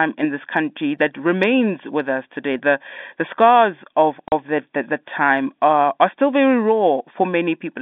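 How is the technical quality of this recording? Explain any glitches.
The recording has one audible glitch, heard over a narrow telephone-band sound that stops short of about 3.6 kHz. Packet loss filled with silence, 4.28 to 4.32 s, just after "the scars of": a 40 ms gap, which fits two lost 20 ms packets, drops out sharply before "that the the time".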